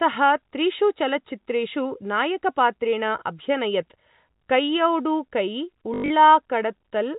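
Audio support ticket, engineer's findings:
Packet loss with last packet repeated, 5.94–6.10 s. Robotic stutter, brief buzz near 50 Hz. About 140 ms missing over 160 ms, longest gap 100 ms. Receiver replays last packet; consistent with 20 ms packets. Band-limited to 4 kHz by G.711 telephone coding, codec damage none or faint.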